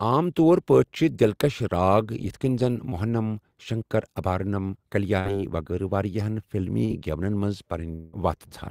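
A speech clip with packet-loss faults of three sizes. Right after "کٔنۍ زَن", at 2.89 to 2.93 s, a short concealed packet loss leaves a brief smear: about 20 ms of audio never arrived and was rebuilt from the preceding sound. Two bursts of packet loss, at 5.19 to 5.27 s and 6.85 to 6.91 s, last longer. The receiver held the last sound for about 54 and 46 ms while turning it down, so a buzz or hiss decays before speech resumes, and about 60 and 40 ms of audio are skipped. At 7.95 to 8.15 s the fill runs about 175 ms and fades without ever reaching silence, and about 180 ms of speech is gone. That stretch is too long for a burst and points to a likely long network dropout.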